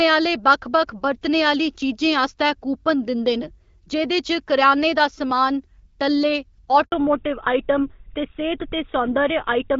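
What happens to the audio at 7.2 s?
At 7.2 s the call is in a fallback to narrowband, which begins at 6.92 s and runs to the end. The wideband link gives way to an older codec, which fits GSM full rate, so everything above 4 kHz disappears and the speech turns duller and rougher. On a spectrogram the energy stops at a flat 4 kHz ceiling.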